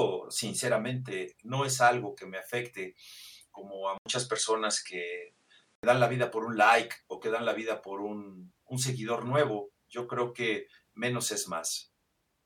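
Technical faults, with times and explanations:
3.98–5.83 s, input switched to a poorer device: after "me afecte como a", an 80 ms gap. Sound dulls, nothing above 10.8 kHz, level shifts by about 5 dB. Clears by "dan la vida por". Likely another microphone or a headset's call profile.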